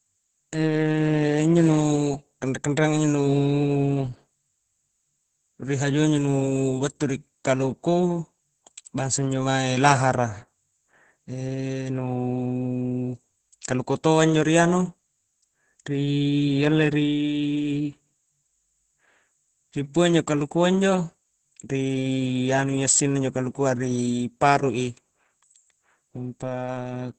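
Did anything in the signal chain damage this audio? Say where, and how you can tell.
Yes. Opus voice compression at the codec stage damages the whole clip. The speech is hoarse and slightly robotic, with nothing above about 8.6 kHz, which points to SILK wideband near 12 kbps. A plain low-pass filter would only muffle; this coarse excitation coding adds texture.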